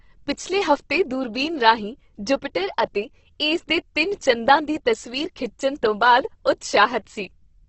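From start to finish the speech carries heavy Opus compression damage, likely from encoding in Opus's music (CELT) mode at a very low rate, which fits something around 12 kbps. Short of bits, the encoder refills bands with folded copies or noise, so voiced sounds turn rough and grainy rather than swirling or warbling the way MP3 does, with few audible spectral holes. Nothing remains above about 8.2 kHz, giving a wideband, top-clipped sound.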